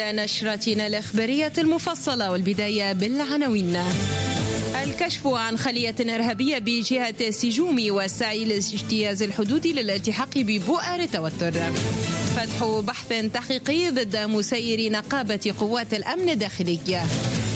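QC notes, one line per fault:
Throughout: gain pumping. The gain ducks around 5 dB under each loud sound, likely a fast limiter fighting excessive input gain.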